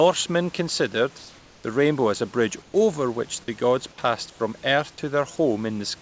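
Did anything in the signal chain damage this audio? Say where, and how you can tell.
Yes, in call processing: comfort noise in place of the background, likely from discontinuous transmission. At 1.18–1.64 s before "the rainbow as a", 2.62–2.74 s after "rainbow as a bridge" and 4.30–4.40 s after "which the gods passed", the real room noise is replaced by steady synthetic hiss about 1 to 4 dB quieter. On a spectrogram these gaps show as smooth, featureless bands.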